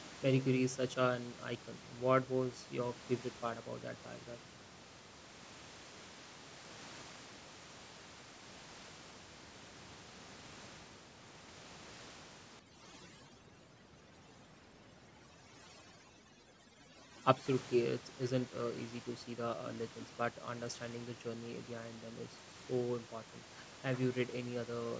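From 12.59 to 17.46 s, overdone noise removal gates away quiet frequency bands near the estimated room noise (elsewhere about 16 dB below the speech), leaving near-silent gaps with twinkling specks. A spectrogram shows a speckled, hole-ridden background.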